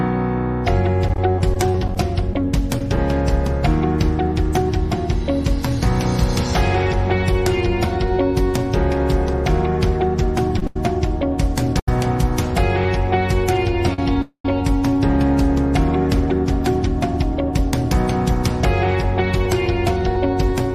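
Repeated packet loss (robotic sound) runs from 1.08 to 2.98 s. The line keeps dropping packets, and each hole, none longer than 20 ms, is patched by extending the previous sound. About 120 ms is truly lost, which leaves the audio choppy with pieces missing.

Repeated stalls (stutter) follow between 10.59 and 11.88 s. Three times the jitter buffer ran dry, the longest wait being 87 ms, and the last sound was stretched to cover each one. Nothing is lost, but the audio drags and stutters.

A short stall from a late packet comes at 13.94 to 13.99 s. One sound is held about 43 ms too long while the buffer waits, then the audio resumes where it left off.

A call audio freeze appears at 14.22 to 14.45 s, likely from packets held up in transit. A 226 ms gap opens as the held sound fades into roughly 90 ms of silence before the audio picks up again.

Jitter buffer speed-up runs from 16.55 to 20.50 s. 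The receiver trims tiny pitch-period slices, about a tenth of a second in total, so the sound plays 2% faster at unchanged pitch.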